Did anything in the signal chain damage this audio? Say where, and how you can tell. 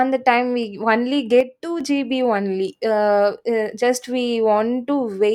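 Yes. From 1.41 to 1.81 s the speech falls abruptly by about 6 dB, recovering just before "gb only". This is one channel drops out: with one stereo side missing, the mono sum keeps only half the shared signal. The likely cause is intermittent analogue wiring.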